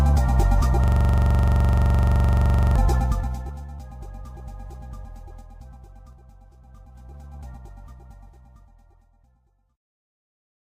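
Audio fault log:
0.84–2.76 s, system hang loop: one 42.67 ms piece of audio repeats exactly 45 times at 23.4 Hz, which fits a 2048-sample buffer cycling while the system froze. The waveform shows identical repeating blocks, and the spectrogram shows evenly spaced vertical stripes.
2.95–3.64 s and 6.53–7.43 s, zipper noise: the level drops about 20 dB and later rises about 20 dB in unsmoothed 2 dB steps, at around 15 and 10 steps per second. Each step clicks, giving a staircase envelope and thin vertical spectrogram lines.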